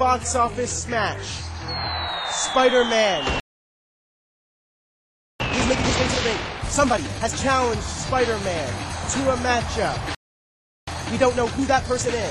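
The audio cuts to silence from 3.4 to 5.4 s and again from 10.15 to 10.88 s, gaps of 2 s and about 0.73 s. These are playback stalls, likely caused by the player running dry of buffered data or its output thread being blocked. After each gap the sound resumes hurried but at normal pitch. This is time-compressed catch-up, where the player removes small slices and cross-fades the joins to shed its backlog. It runs at twice normal speed from 5.4 to 7.4 s and at 1.5 times from 10.88 to 12.22 s.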